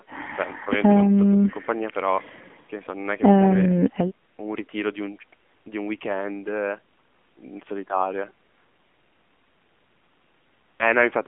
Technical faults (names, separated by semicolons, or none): AMR narrowband mobile codec